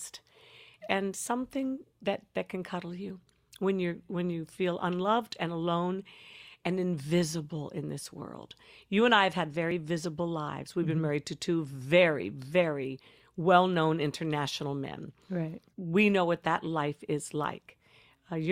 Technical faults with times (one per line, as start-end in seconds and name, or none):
9.71 overlap between stream segments